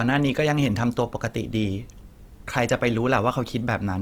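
Across the whole speech clip there is plainly audible Opus compression damage, likely from encoding at a low rate in the codec's music-oriented mode, consistent with roughly 24 kbps. The bandwidth stays full, extending to about 20.2 kHz, but with too few bits the encoder fills bands from folded lower content or noise. The result is a rough, grainy texture over the voiced sounds, with little of the swirling heard from MP3.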